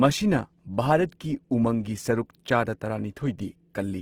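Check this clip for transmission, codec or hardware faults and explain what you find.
One codec fault runs through the whole speech clip. The damage is plainly audible from start to finish. The likely cause is Opus compression in its music (CELT) mode. The band energies are kept, but starved bands are filled with folded or noise content. This fits a bitrate near 16 kbps. The sound is rough, grainy and noisy rather than swirly. Fullband range is kept, with nothing above about 20.2 kHz.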